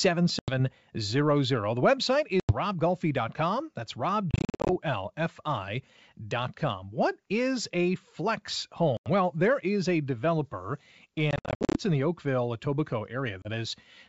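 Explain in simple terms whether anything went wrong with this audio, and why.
The speech drops out in short, hard-edged gaps, which is packet loss on an ADPCM call. Single gaps of about a tenth of a second come at 0.39, 2.40 and 8.97 s (after "is a flex"), and a brief one at 13.42 s. Choppier stretches of several broken bits run from 4.31 to 4.70 s and from 11.31 to 11.76 s, between "there is a developer" and "in the". After each gap, the G.722 decoder is briefly out of step with the sender, so the speech comes back slightly distorted before settling.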